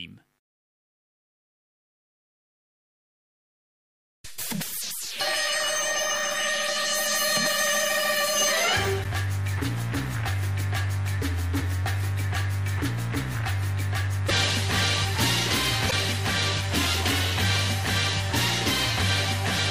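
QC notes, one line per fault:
9.00 s, 14.25 s and 15.87 s: damaged data in a compressed stream. Three separate bursts, each lasting about 55 ms, cut into the sound as short chirps or blips. At each point the compressed data is corrupt, so the decoder misreads or discards the affected frames, loses its frame alignment, and must scan forward for the next valid header. The garbled output during that resynchronisation is what produces each brief, unnatural squawk.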